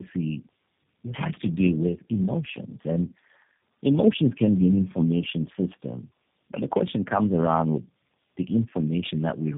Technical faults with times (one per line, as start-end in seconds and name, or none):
0.00-9.57 tandem speech coding